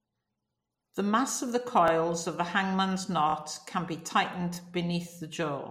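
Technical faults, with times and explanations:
1.88–1.90 s (after "mass of the"), 3.30–3.34 s (after "of the hangman's"), 4.55–4.57 s (after "can be tightened"), repeated buffer: a brief stutter with hard joins, where a 23 ms piece replays once, twice in the middle, because fresh audio arrived late. This fits a 1024-sample buffer.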